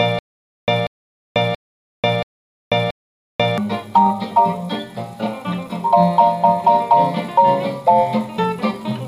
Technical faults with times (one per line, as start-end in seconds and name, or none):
0.00-3.58 stutter with silent gaps